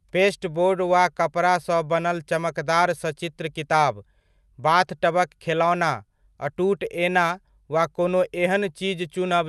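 Nothing goes wrong anywhere in this speech, and the call path it came through just leaves its ordinary coding character, with the top end rolling off around 12 kHz in a way that fits an Opus link.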